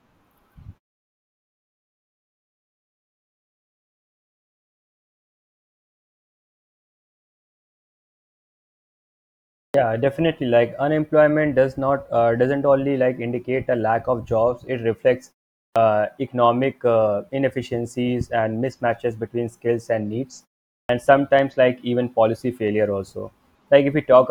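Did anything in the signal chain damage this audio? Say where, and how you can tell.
Yes. This is a clipped start after a pause, at the playback stage. The output device idles during silence and loses roughly 40 ms when it wakes: about 43 ms at 9.70 s after a nine-second gap, about 37 ms at 15.72 s before "uh economic uh inefficiencies", and about 43 ms at 20.85 s between "between skills and needs" and "sometimes like even policy". The waveform jumps from silence straight into speech. On the spectrogram, the onset energy appears as a hard vertical edge with no lead-in.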